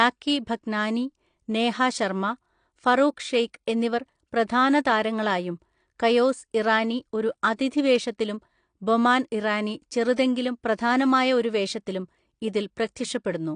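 AAC compression runs through the whole of this speech recording. Nothing survives above 9.8 kHz, and the plainly audible dullness and smearing point to AAC-LC at a low rate, likely around 32 kbps, where the encoder lowers its cut-off and starves the remaining bands of bits. Pre-echo appears from 10.16 to 10.18 s as a short hiss spread over about 20 ms just ahead of a sharp onset. The quantisation noise sized for that loud attack is spread across the quiet start of the same transform block, so it is heard before the attack itself.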